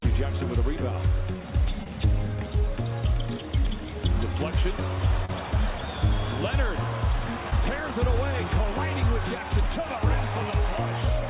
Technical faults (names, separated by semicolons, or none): short concealed packet loss